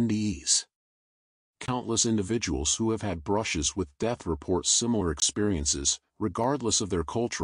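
At 1.66 s and again at 5.2 s the audio drops out for 20 ms, and at 6.44 s there's a much shorter dropout of about 4 ms. Each one is a block of digital silence, where the sound cut out with no fade. The two longer ones sound like tiny holes and the last one like a tick.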